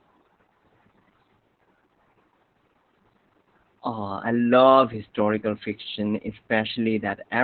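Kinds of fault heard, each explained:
Opus voice compression: The speech has been through Opus's SILK linear-prediction coder at a very low rate, and the heavy damage fits about 8 kbps with 20 ms frames. At that rate the encoder has dropped to narrowband, so everything above about 4 kHz is gone and consonants sound dull and muffled. The excitation is coded so coarsely that the voice comes out hoarse and faintly robotic, with a synthetic edge throughout the clip.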